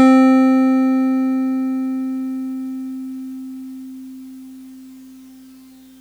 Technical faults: hard clipping

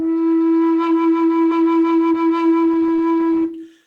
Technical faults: skip ahead; jitter buffer speed-up

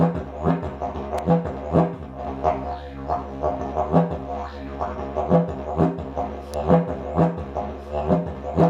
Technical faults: electrical switching spike

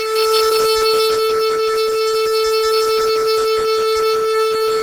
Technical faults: Opus compression

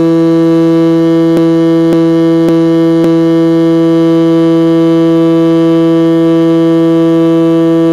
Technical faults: DECT cordless phone buzz; repeated frames

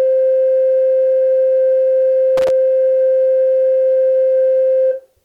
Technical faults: loose connector crackle

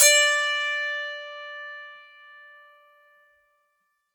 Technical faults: none

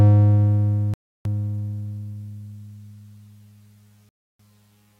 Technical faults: Bluetooth stall

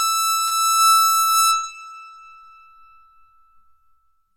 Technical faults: short concealed packet loss

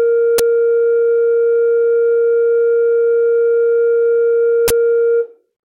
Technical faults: uninitialised buffer

